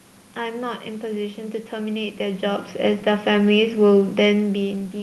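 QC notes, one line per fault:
No faults found.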